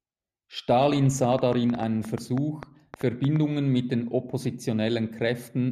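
Speech, where likely interference or a faulty connection injects a train of clicks from 1.24 to 3.37 s: around fifteen unevenly spaced pops, about 7 per second, peaking about 10 dB above the speech.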